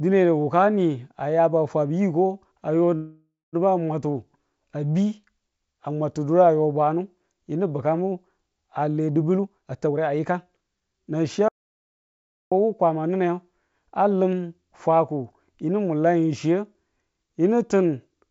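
From 2.96 to 3.56 s a call audio freeze: likely delayed packets emptied the jitter buffer, so a fading buzz fills about 0.57 s, including 180 ms of silence, before the speech resumes intact.

From 9.35 to 13.09 s a jitter buffer speed-up plays the speech at 115% speed by trimming pitch periods, cutting roughly half a second; it sounds hurried at unchanged pitch.

Inside that stretch, 11.48 to 12.52 s, an audio dropout to silence removes 1.03 s of speech, likely from lost input, leaving silence with no room tone. Throughout, the G.722 call path at 64 kbps leaves nothing above 8 kHz.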